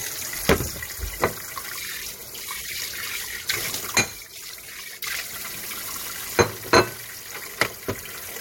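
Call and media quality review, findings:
Compressed frames skipped at 1.50, 3.49, 4.87 and 8.01 s: the audio jumps ahead roughly 50 ms (about 70 ms at 3.49 s), two or three 26.1 ms decoder frames each. Overlapping frames leave a smeared blip, unlike a dropout's silence or a hard click.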